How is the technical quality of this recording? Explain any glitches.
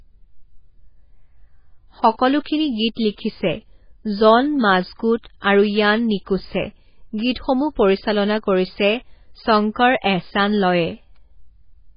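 Quality is poor, with heavy damage throughout. The speech sounds watery and swirly, and nothing sounds above 5 kHz. MP3 compression is the likely cause. The starved encoder cut the treble and dropped weak detail, which fits a very low bitrate near 16 kbps.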